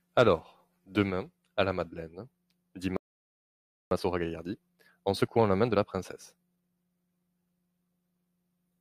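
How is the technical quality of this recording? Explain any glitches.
The recording has two linked playback glitches: a stall followed by a stretch of hurried speech.

At 2.97 s the speech cuts out and the output is silent for about 0.95 s, until 3.91 s, when it resumes where it stopped. This is a playback stall, likely the player running out of buffered data or its thread being held up. Because the speech continues without a missing piece, it is distinguishable from a dropout, which would lose the audio in the gap.

From 3.91 s to 6.91 s the speech runs at 1.25 times its normal speed while keeping its normal pitch. This is time-compressed catch-up: the player trims its backlog by cutting out short slices and cross-fading across the joins. A plain speed-up would raise the pitch. Here the pitch stays put, and the hurry lasts three seconds before settling.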